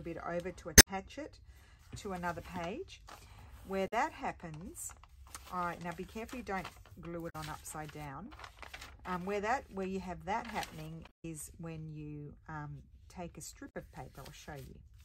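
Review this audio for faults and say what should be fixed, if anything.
Damaged data in a compressed stream causes five brief glitches, at 0.75–0.88 s, 3.86–3.93 s, 7.28–7.35 s, 11.05–11.25 s and 13.69–13.76 s. Corrupt bytes make the decoder misread frames and resync at the next header. Re-fetch the file and verify checksums before decoding.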